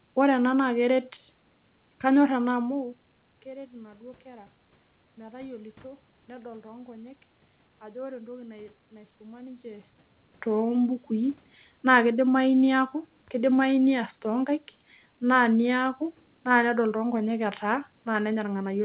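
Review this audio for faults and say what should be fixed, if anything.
Nothing needs fixing: the speech arrives intact over a narrowband G.711 A-law call path at 64 kbps, which band-limits it to about 4 kHz, with room noise beneath it and the level shifts near 2.5 s and 9.5 s coming from the talker moving relative to the microphone rather than from the system.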